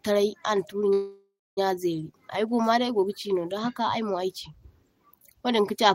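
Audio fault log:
0.93–1.59 s, call audio freeze: speech stretches into a fading buzz or hiss, then 240 ms silence, resuming 636 ms late with nothing lost, likely from delayed packets emptying the jitter buffer.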